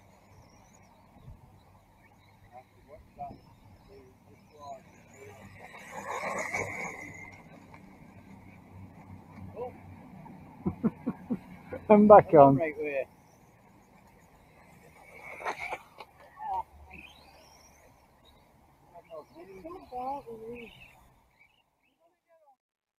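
A noise suppressor meant for speech is running on this sound the whole way through, treating held tones and tails as noise and pulling them down by around 15 dB, so sustains sink, the sound pumps and thins, and that includes the fade-out from about 21 s.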